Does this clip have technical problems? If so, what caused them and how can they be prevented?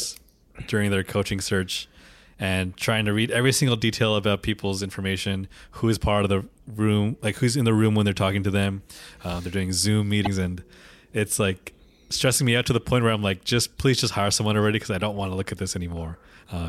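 Yes. At 10.23 to 10.27 s, just before "and it's like stressing", the speech hits damaged data in a compressed stream: a stretch of the encoded bytes is corrupt, so the decoder misreads those frames, loses sync and skips forward to the next valid frame header. That 40-odd millisecond hiccup comes through as a brief glitch in the speech. Preventing it means carrying the stream over a checked, reliable path, with frame checksums enabled and files verified after transfer.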